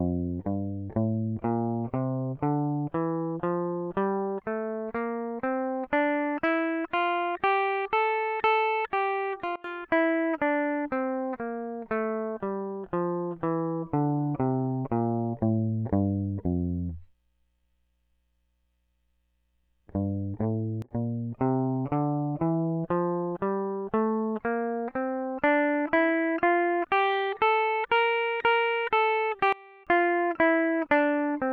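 At 9.56–9.64 s, 20.82–20.91 s and 29.53–29.87 s the music drops abruptly by about 22, 20 and 24 dB, a sudden gain jump, likely from a gain setting applied without a ramp. The waveform shows a sheer step, and the spectrogram dims across all frequencies, background included.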